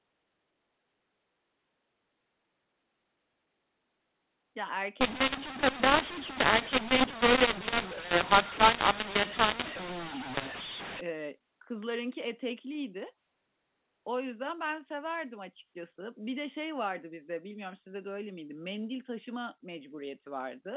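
From 5.01 to 11.01 s the speech turns harsh and gritty, with hiss in the pauses. That's mu-law and A-law mixed up: A-law samples decoded as mu-law scramble the levels.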